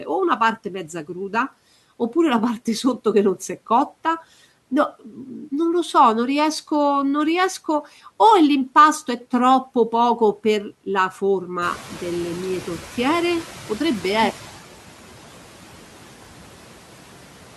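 Throughout the speech, the background noise dips between phrases and swells back under the voice. These are noise suppressor artifacts: the processing pulls down bands it judges to be steady noise, frame by frame, by about 12 dB.

From 11.61 s to 14.51 s, after the room noise jumps by about 17 dB just before that point, the noise comes through louder and then gradually sinks. This is the noise suppressor catching up: its noise estimate lagged the sudden rise and took 2.9 s to adapt, cutting only about 9 dB while it caught up.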